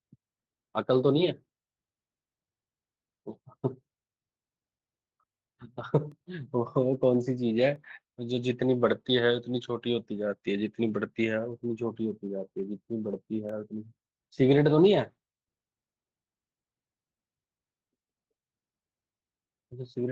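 Speech, carried over a WebRTC call path whose codec limits the top end to about 12 kHz. It has three blocks of digital silence, at 6.12 s, 7.76 s and 13.49 s, lasting 1.33 ms, 0.67 ms and 0.21 ms. Each drops abruptly to silence and back, so it sounds like a tick. The first two fit 64-sample and 32-sample blocks left unfilled, likely because output buffers were not delivered in time.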